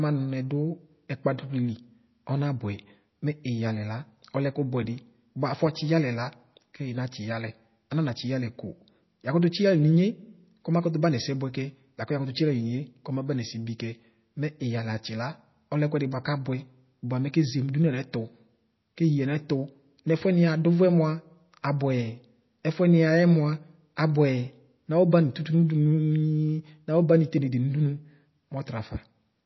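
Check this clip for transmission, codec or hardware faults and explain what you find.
One fault is present, and it runs through the whole clip: plainly audible codec damage, most likely from MP3 compression at a very low bitrate, which fits about 24 kbps. Short of bits, the encoder discards everything above 5.8 kHz and zeroes weak frequency lines that flicker on and off between frames. The speech therefore sounds dull, watery and swirly, with smeared consonant onsets. A spectrogram shows a hard ceiling at 5.8 kHz and patchy, blotchy gaps below it.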